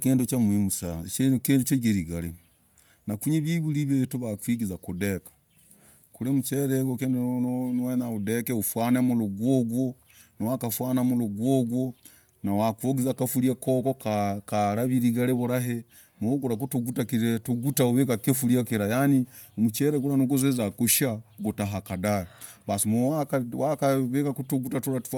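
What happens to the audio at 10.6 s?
At 10.6 s you're hearing the same thing that runs through the whole speech clip: Bluetooth LC3 compression damage, likely from an LE Audio link. The transform codec works in 10 ms frames, and at a rate that fits roughly 48 kbps it zeroes and noise-fills upper bands, so there's a plainly audible breathy, grainy edge, with nothing above about 20.2 kHz.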